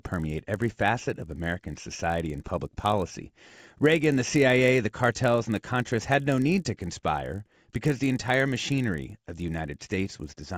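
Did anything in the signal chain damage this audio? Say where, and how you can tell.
Yes. The sample-rate conversion stage is at fault: the resampler restarted on every block. A 50 Hz buzz runs under the speech throughout and drops away in pauses. Each 20 ms block went from 16 kHz to 48 kHz alone. Every block edge lacks its true neighbours and gains a small error.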